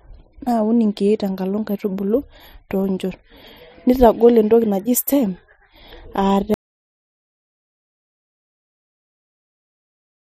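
At 6.54 s the speech cuts out to complete silence through to the end. This audio dropout to silence most likely came from lost input, written as silence.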